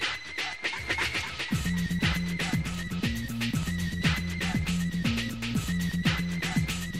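At 2.12 to 2.15 s a single loud pop sits on top of the sound, peaking a few decibels above the surrounding level. A brief voltage pulse, likely from a plug, switch or static discharge, entered the chain and was shaped into a sharp thump while the audio continued underneath.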